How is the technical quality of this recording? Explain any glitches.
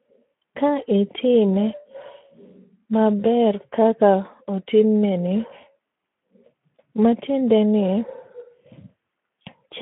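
The recording is degraded throughout by Speex codec damage. Across the whole clip the speech sounds hoarse and grainy, and its band is limited to about 150 Hz to 3.4 kHz. The low-rate CELP coding starves the excitation, which fits a bitrate near 11 kbps.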